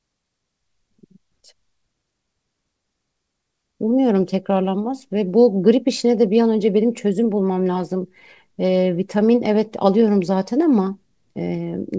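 No technical faults can be heard in this speech recording. It has passed through a WebRTC call path, and nothing reaches above 8 kHz, which fits a wideband codec such as G.722.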